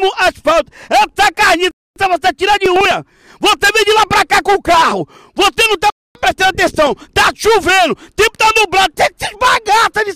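At 1.71 to 1.96 s the sound drops out for 250 ms with abrupt edges, a gap between chunks. The audio was delivered in roughly 4 s chunks and silence was inserted at the join rather than lost material. The same hard-edged hole recurs from 5.90 to 6.15 s.

From 2.58 to 2.91 s there is a short burst of gritty crackle: processor overload crackle. The processor missed several consecutive deadlines on buffers of around 10 ms each. Each missed buffer was skipped, leaving tiny hard-edged jumps that merge into tearing until the load clears.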